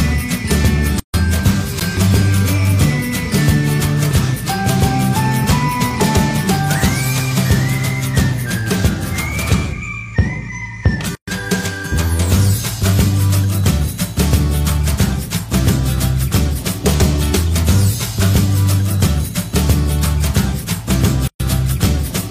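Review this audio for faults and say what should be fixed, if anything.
Gap at a join of encoded pieces, at 1.00 to 1.14 s, 11.15 to 11.28 s and 21.28 to 21.40 s, recurring every 10 s. The sound drops out for about 144 ms the first time and about 124 ms afterwards, with smeared edges, then resumes where it stopped. Each piece was encoded on its own, and the encoder's start-up delay and last-frame padding were kept at every join. To prevent it, trim the encoder delay and padding before joining, or encode the whole programme in one pass.

Block of digital silence, at 1.80 s. The sound cuts out for about 12 ms and back with no fade, short enough to come across as a tick or dip rather than silence. The block's length fits a 512-sample buffer that was likely not filled in time. To prevent it, enlarge the output buffer or fix whatever stalls the processing so every buffer is filled before it is due.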